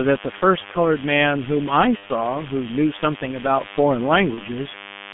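A nearby DECT cordless handset or base station is radiating its 10 ms transmit bursts into the audio circuitry, where they are rectified into a DECT cordless phone buzz. Throughout the speech this adds a thin, steady buzz at 100 Hz, rich in harmonics, sitting roughly 15 dB below the speech level. It never lets up, so it is audible in the pauses as well as under the talking.

Also throughout, the speech has been squeezed through the G.723.1 codec. The heavy coding damage points to its 6.3 kbit/s mode with 30 ms frames. The line band runs only from 150 Hz to 3.5 kHz, and the codec's slow-moving voice model cannot follow fast changes. The result is muffled, hoarse speech with smeared consonants, thin at the bottom and dull at the top.

From 1.97 to 2.10 s, VoIP packet loss concealed by the speech codec takes over. About 60 ms of audio went missing, which fits two 30 ms frames. The decoder fills the hole by extrapolating its last pitch and filter while ramping the gain down. 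The speech is stretched into a fading buzzy tone or coloured noise, and it stays weak or distorted briefly after real audio resumes. The same happens on a smaller scale from 4.34 to 4.44 s, where about 30 ms, a single frame, was lost.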